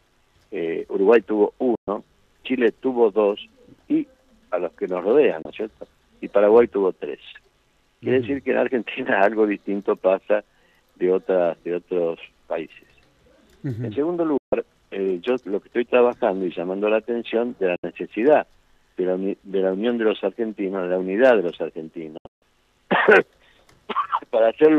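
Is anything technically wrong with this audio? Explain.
Yes, there are digital broadcast dropouts. At 1.75–1.88, 5.42–5.46, 14.38–14.53, 17.76–17.84 and 22.18–22.42 s, the receiver muted after losing bad frames. The sound snaps to silence within about 3 ms for 24 to 144 ms, in steps that fit 24 ms frames. The last dropout breaks into several short holes over 240 ms, and the audio in each gap is gone.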